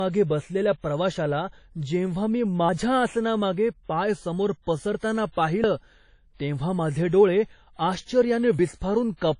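Right from the start there's washy, ringing speech with nothing above 10.1 kHz, likely WMA compression at a low bitrate, something like 32 kbps. At 2.69 s after "बसलेल्या प्रवाशाला जेव्हा मी", 5.64 s after "पाय समोर पसरताना", and 8.59 s, roughly 50 ms drops out and the edges butt together, likely audio missing between chunks, repeating every 3 s.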